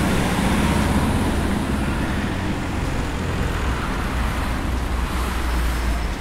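Nothing technical stands out in this recording of sounds; it's a simple, unremarkable capture with nothing to flag.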